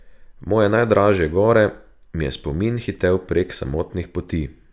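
No technical faults are audible.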